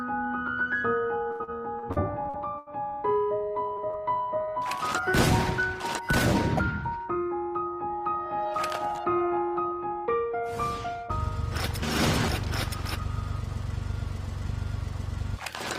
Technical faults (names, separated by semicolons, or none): repeated packet loss (robotic sound); jitter buffer slow-down; short stall from a late packet; short concealed packet loss; jitter buffer speed-up